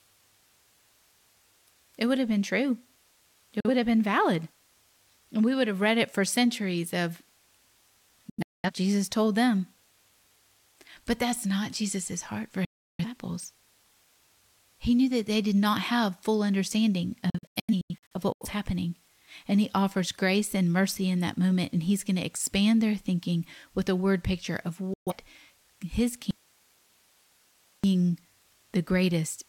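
Digital broadcast dropouts at 3.60, 8.30, 12.65, 17.30 and 24.94 s: the receiver mutes failed frames with 3 ms fades, leaving blank vertical gaps, scattered holes at 8.30 and 17.30 s.

From 26.31 to 27.84 s, an audio dropout to a faint residue leaves only hiss about 40 dB down, likely a lost signal on a live path. The waveform shows a low noise floor.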